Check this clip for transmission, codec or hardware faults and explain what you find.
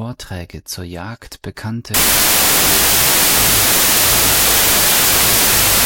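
One fault is present: a wrong sample width from 1.94 s to the end. Samples that appear to be 32-bit integers are read as 16-bit, so each splits into two values. The low bytes become loud noise that buries the speech, and playback runs at 0.5x speed, an octave low.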